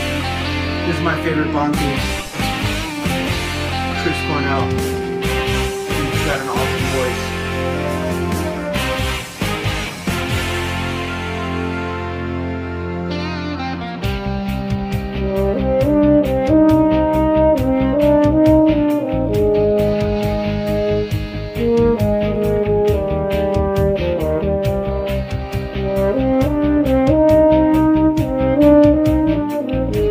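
No dropouts, distortion, glitches or other transport or processing faults turn up anywhere in the recording.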